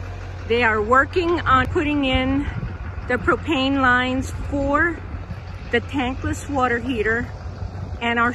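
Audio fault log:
1.65 s, compressed frames skipped: the audio jumps forward abruptly, losing roughly a tenth of a second. Whole frames of the compressed stream were never played, either missing from the file or rejected by the decoder as damaged, so playback resumes later.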